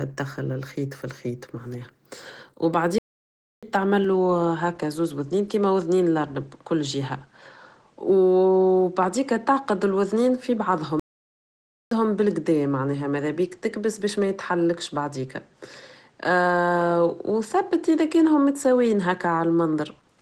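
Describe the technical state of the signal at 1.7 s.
At 1.7 s the speech carries Opus voice compression, present throughout the clip. The hoarse, slightly robotic texture points to coarse linear-prediction coding below 8 kHz with a thin transform layer above, fitting about 16 kbps. Unlike a low-pass filter, the band stays open to about 20 kHz.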